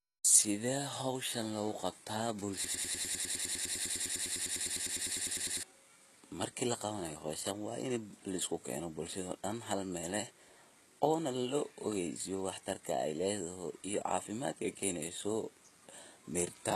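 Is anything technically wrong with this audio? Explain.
Yes, two problems are audible.

Throughout the speech, the treble sounds gritty and metallic, s sounds come out lispy, and nothing is present above 12.3 kHz. This is likely heavy HE-AAC compression, with a bitrate around 16 kbps. The upper band is synthesised by copying lower bands upward, so its harmonics don't line up with the real ones.

From 2.64 to 5.63 s, just after "hoshaan loguqabtaa", a 101 ms fragment repeats exactly, back to back, about thirty times, like a broken-record loop. The likely cause is a stalled player, encoder or stream resending its last buffered fragment, so the speech meant for that stretch is lost.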